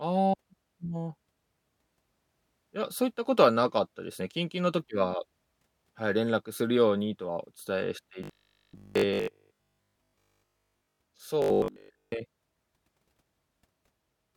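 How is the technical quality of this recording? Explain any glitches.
The speech has one recurring glitch: robotic sound from repeated short buffers, from 8.24 to 11.02 s and again from 11.42 to 12.12 s. In both stretches the voice becomes a rigid, metallic buzz pitched at 50 Hz, loosely tracking the speech. The likely cause is audio arriving too seldom, with playback looping the last 20 ms segment to fill the gaps. That loop sets the fixed 50 Hz tone, and most of the real audio in those spans is skipped.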